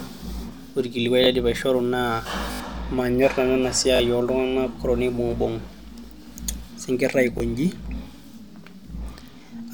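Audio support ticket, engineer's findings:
Short stutters at 1.24, 2.52–2.6, 3.96–4.0 and 7.38–7.4 s, hard joins. Repeated buffer: late audio, so the output replays its last block, which fits a 20 ms buffer. Longest run about 70 ms lost.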